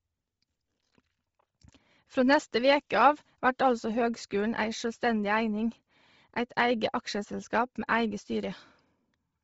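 Throughout the speech, the signal has likely been squeezed through Bluetooth LC3 compression at a low bitrate, consistent with roughly 24 kbps in 7.5 ms frames. Upper detail is discarded and noise-filled, leaving nothing above 7.7 kHz and a heavy, breathy, grainy edge.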